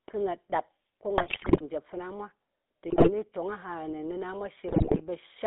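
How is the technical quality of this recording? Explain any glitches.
The technical quality is poor. The whole recording has the coarse texture of a mobile call, and three short bursts of corrupted decoding interrupt it.

The GSM full-rate codec is present from start to finish. The codec represents the vocal tract as a filter and excites it with a sparse, regularly spaced pulse train, so fine detail in the excitation is discarded. The result is a buzzy, gravelly roughness on the speech, fitting a 13 kbit/s full-rate stream. The audible band runs only from about 250 Hz to 3.7 kHz, which gives the speech a thin, boxed-in quality.

GSM bit errors occur from 1.18 to 1.63 s, 2.90 to 3.11 s and 4.68 to 5.01 s. In each stretch, corrupted bits reached the decoder, so the filter, pitch and gain parameters for affected frames were decoded wrongly. The spectrum is bent out of shape and the level lurches from frame to frame. 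The speech breaks into squawks, pops and a gargling sound. The first and last bursts are the longest.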